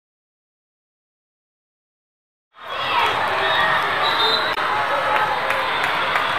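At 4.51 s, about 4.58 s, there's a brief glitch lasting roughly 70 ms, and that's damaged data in the compressed stream. A stretch of the encoded file got corrupted, so the decoder misread those frames, lost sync and had to hunt for the next valid frame header, which is why you hear a short glitch instead of the audio. The smooth fade-in from around 2.5 s to 3.12 s is clean and not part of the problem.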